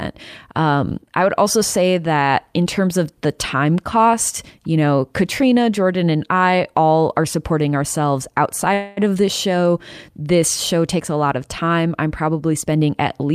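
Call audio freeze at 8.73–9.10 s, after "all are supporting ourselves": about 234 ms of fading buzz is inserted, likely from delayed packets draining the jitter buffer, before "this show" resumes intact. Jitter buffer speed-up at 12.65–13.31 s, after "of time I'm probably": the receiver trims pitch-period slices, around 70 ms in total, so speech runs 108% fast at unchanged pitch.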